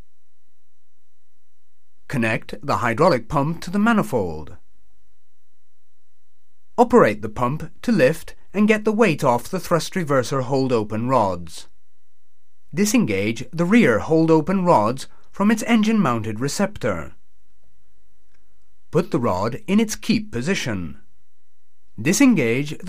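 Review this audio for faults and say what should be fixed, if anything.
From 0.65 to 1.00 s the sound turns into a rigid, metallic buzz fixed at about 66.7 Hz: robotic sound from repeated short buffers. The likely cause is audio arriving too seldom, so the playback side keeps looping a roughly 15 ms slice, one period of that buzz, while the real material in between is skipped. Most of this stretch is repeated rather than new audio. To prevent it, give the capture and network path enough buffering and steady scheduling that new audio always arrives before the output runs dry.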